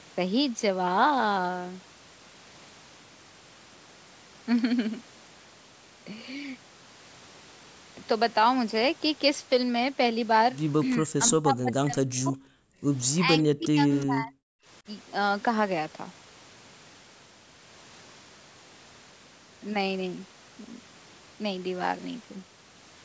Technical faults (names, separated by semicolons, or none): speech suppressed in double talk; background gated by the echo canceller; echo leak